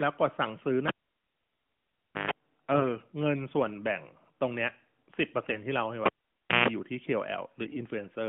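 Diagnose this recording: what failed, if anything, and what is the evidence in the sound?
The analogue wiring failed: a live cable was pulled and plugged in twice. At 0.88 s a pop drops the speech to near silence for 1.38 s, then 134 ms of 50 Hz mains buzz sounds as the bare tip makes contact, and a second pop restores the signal by 2.31 s. At 6.06 s the cycle repeats: 0.57 s unplugged, 156 ms of 60 Hz buzz, sound back by 6.68 s, all heard through the narrow telephone band of the mobile link.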